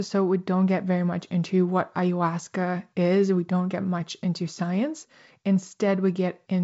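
No technical faults can be heard in the speech. It has passed through G.722 wideband telephone coding at 56 kbit/s, so nothing reaches above about 7.7 kHz, and the codec leaves a light hiss, slightly more noticeable in the lower band at this bitrate.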